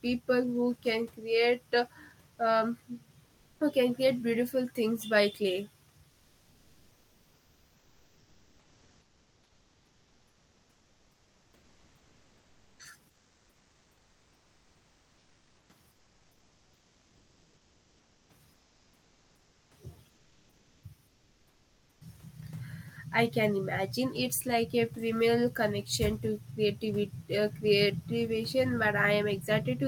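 The sender likely stopped transmitting during pauses (discontinuous transmission, as in Opus DTX), so the receiver filled each gap with comfort noise in place of the background. The room's real background gives way to a flat, featureless hiss about 2 to 4 dB quieter at 3.25–3.55 s (between "can create uh um" and "who can create beautiful"), 6.13–12.79 s (after "beautiful things by clay"), 13.09–15.67 s, 15.91–18.25 s, 18.55–19.69 s, 20.11–20.83 s and 21.07–21.97 s.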